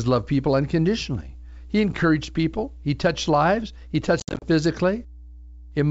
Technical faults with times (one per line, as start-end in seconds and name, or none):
0.00-5.90 mains hum
4.20-4.44 packet loss on an ADPCM call